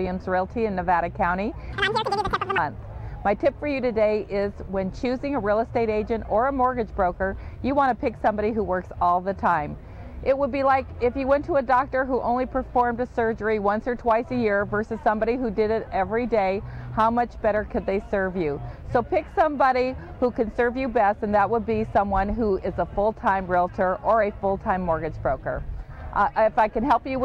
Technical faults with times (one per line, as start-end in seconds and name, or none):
1.73-2.58 audio read two samples at a time (double speed)